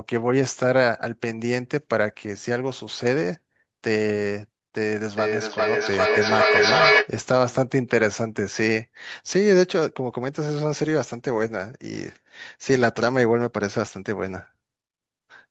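From 5.17 s to 7.14 s, the speech comes back on itself about every 0.4 s, each return thinner and more ringing, and the echo climbs to about 4 dB louder than the speech itself. This is feedback echo between two devices: two devices in the same room are on one call, one device's loudspeaker replays the other's microphone, and that microphone captures it again. Each echo canceller only removes its own playback, so the loop goes round unchecked, audible through the call's 8 kHz band limit.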